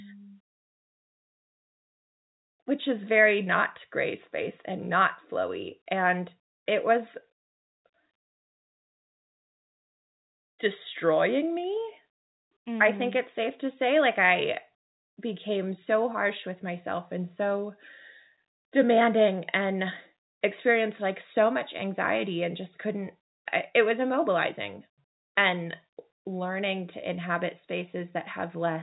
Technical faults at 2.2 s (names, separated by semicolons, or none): none